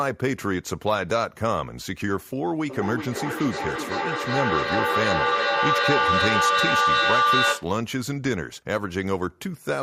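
Speech recording with feedback howl: a microphone-to-loudspeaker loop gaining level on each pass builds a tone near 1 kHz from 2.66 to 7.76 s, pulsing roughly every 0.4 s and peaking about 4 dB above the speech.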